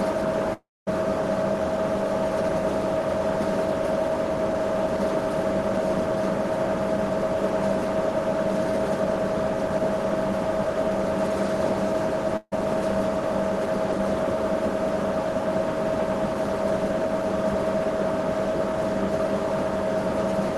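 From 0.53 to 0.89 s, the sound does not stop cleanly. The last moment is stretched into a hiss that dies away, and then about 0.23 s of near-silence follows. When the audio returns it has jumped ahead, with roughly 0.34 s of material gone. That pattern of concealment, decay and then a skip forward is most likely a long network dropout. The receiver ran out of incoming audio, improvised briefly, then gave up until data arrived again.

At 12.37 s there is a shorter gap lasting until 12.54 s, a burst of packet loss. For about 150 ms the receiver fills in by extending the preceding sound and fading it, leaving roughly 40 ms of near-silence at the end. Playback then picks up about 160 ms later in the material than where it broke off, so that stretch is skipped. The concealment shows as a brief smeared tail, and the highs throughout roll off near 12 kHz, as the call codec passes.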